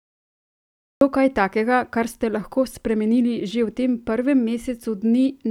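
A cut-off start affects this speech recording: the first 1.01 s is digital silence, and at 1.01 s the talker comes in abruptly with "kaj takega kar ste", already mid-sound. Capture or streaming evidently began late, so the opening of the utterance was never recorded. Instead of a natural attack or fade-in, the waveform jumps straight from nothing to speech, which makes the start sound clipped off.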